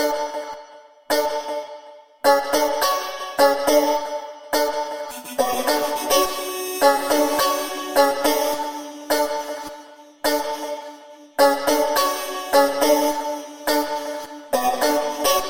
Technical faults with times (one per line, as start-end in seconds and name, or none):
none